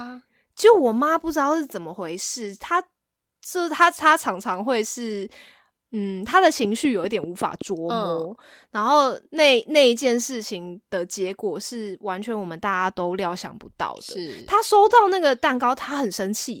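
A train of clicks runs from 6.65 to 7.63 s: roughly seven evenly spaced ticks at about 5.2 per second, peaking around 5 dB above the speech. Their much-alike shape and steady pace point to likely interference from nearby equipment or a faulty connection or power supply.

A lost packet rebuilt from error correction appears at 11.27 s, covering 20 ms, and again from 14.85 to 15.03 s, covering 100 ms, which fits about five separate 20 ms packets. The decoder played low-bitrate copies carried in the following packets, so there is no gap, but those stretches sound rougher and noisier.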